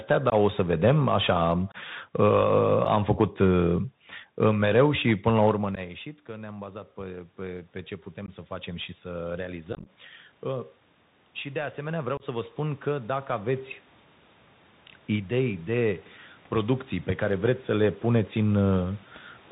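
Throughout the speech, the Bluetooth CVSD headset codec limits the band to below 4 kHz, adds a granular hiss, and makes sibilants scratchy, which fits a 64 kbps CVSD link.

Unconcealed Bluetooth headset packet loss first appears at 0.30–0.33 s, just before "o să vedem așa", as a hole of about 19 ms with abrupt edges. It recurs at 1.72–1.76 s after "să vedem așa am" (about 23 ms) and at 2.85 s (about 8 ms).

From 5.51 to 10.76 s, after "mereu și până la", automatic gain rising lifts voice and room noise together by about 8 dB. The control is responding as the talker moves away around 5.5 s. Within that stretch, further packet losses cut holes at 5.75–5.79 s (15 ms) and 8.26–8.30 s (about 19 ms). At 9.73–9.89 s, scattered drops totalling about 83 ms over 135 ms make the voice sound crackly and chopped.

A second automatic gain rise of about 5 dB swells the level from 11.42 to 13.57 s. During it, a final dropout of about 26 ms falls at 12.17–12.23 s.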